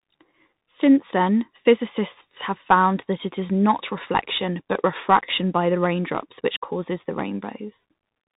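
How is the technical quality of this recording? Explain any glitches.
The recording is degraded throughout by a single fault. Bluetooth CVSD headset codec, across the whole clip: each sample is coded as one up-or-down bit with an adapting step, consistent with a 64 kbps headset link. Nothing above 3.8 kHz survives, so the speech sounds muffled and narrowband, with scratchy sibilants, distorted loud peaks and a granular hiss underneath.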